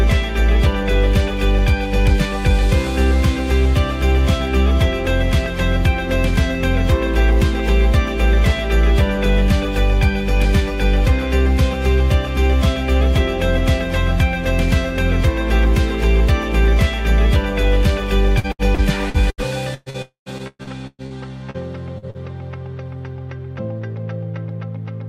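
From 18.39 to 19.97 s the audio turns choppy and robotic: repeated packet loss leaves eight holes, the longest about 118 ms, and each is patched by stretching the last sound, so roughly a quarter of the span is synthetic. On a spectrogram this shows as short blocks of frozen, horizontally smeared bands alternating with normal texture. The waveform shows repetitive, oddly regular patches with abrupt joins.

At 20.02 s the sound cuts out for about 240 ms, most likely a long network dropout. What remains decays as a fading buzz and leaves about 120 ms of near silence before audio resumes at 20.29 s, with the lost portion simply absent. On a spectrogram a smeared tail fades into an almost empty vertical strip. In the waveform the envelope collapses to a flat line.

Repeated packet loss returns from 20.38 to 21.13 s. Five gaps, the longest about 116 ms, are concealed, and filled sound makes up roughly 43% of the span. 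The choppy quality is therefore denser than before. The spectrogram shows more frequent frozen blocks, and the waveform shows the same regular, repeated patches.

Three brief smears follow, each a short concealed packet loss of about 40 ms: 21.50 to 21.57 s, 21.98 to 22.05 s, and 22.10 to 22.17 s. Each is heard as a quick wobble where the last sound was extended and blended back. On a spectrogram each is a thin vertical slice of flattened, smeared energy. The waveform shows a subtle discontinuity at each join.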